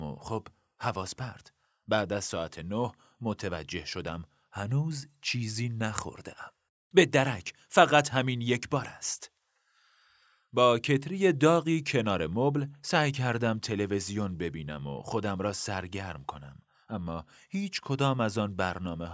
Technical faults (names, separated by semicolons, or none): none